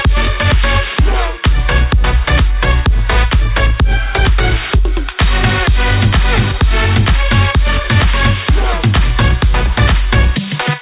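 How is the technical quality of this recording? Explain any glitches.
No glitches to report: the audio comes over a call path whose band stops at 4 kHz, which fits G.711 mu-law telephone coding at 64 kbps, and nothing else stands out.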